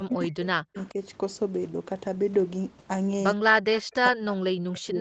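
A short speech recording whose voice dips, by about 40 dB at its deepest, across 0.0–0.98 s (roughly 0.7 s of it), 3.37–3.69 s and from 3.92 s to the end. This is speech suppressed in double talk, likely an echo canceller ducking the talker while the far side also spoke. An echo leak appears at 0.75–0.89 s and 3.73–3.82 s: a repeat trailing the voice by 108 ms, about 25 dB and then about 15 dB below it, likely loudspeaker pickup the canceller missed. Its fixed delay separates it from room reverberation.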